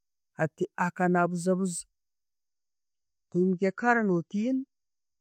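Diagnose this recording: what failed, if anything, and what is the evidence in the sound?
Network stage: an adaptive stream at a lower bitrate. At 2.47 s the speech changes abruptly, with no gap, and stays that way to the end. Nothing remains above 8.3 kHz, and codec artefacts rise. This fits a switch from 128 to 32 kbit/s MP3 after the connection slowed.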